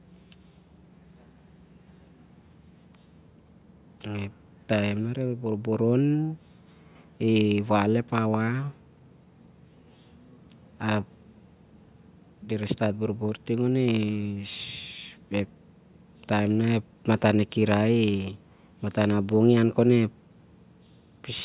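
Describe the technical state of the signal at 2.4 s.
At 2.4 s the speech signal is intact, with no audible dropout, distortion or other technical fault.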